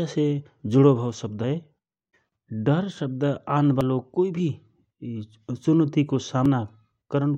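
At 2.32 s, just before "डर शब्द", the speech jumps forward with no gap, losing about a tenth of a second. The same skip recurs at 3.81 s, between "डर शब्द" and "कोइ भि", and at 6.46 s with a shorter loss of about half that. The likely cause is a dropped buffer (overrun), where samples were overwritten before being read. Unlike a dropout, no silence appears. The audio is simply spliced ahead.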